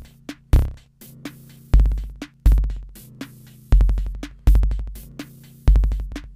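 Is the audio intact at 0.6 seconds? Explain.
Yes, the audio is intact at 0.6 seconds, with no dropout, click, distortion or other fault at that moment.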